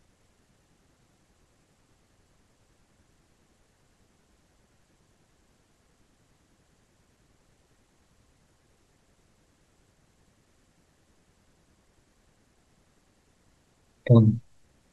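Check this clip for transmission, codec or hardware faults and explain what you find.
One hardware fault turns up in the speech. Periodic USB or driver dropouts run from 7.98 s to 13.95 s, about seven times at a steady 1.0 s spacing. Something blocks the audio path each second, so a few milliseconds of signal are skipped outright, leaving a regular tick in the speech.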